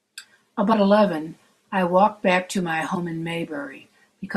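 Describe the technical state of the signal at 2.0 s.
At 2.0 s the speech signal is intact, with no audible fault at that moment.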